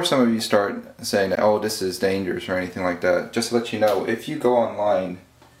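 There's a block of digital silence at 1.35 s, a roughly 16 ms dropout to nothing that reads as a quick tick or dip, from an unfilled output buffer or invalid calculated samples.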